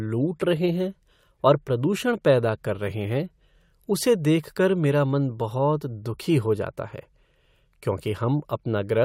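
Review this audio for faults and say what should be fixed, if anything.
Nothing needs fixing; no faults are audible here.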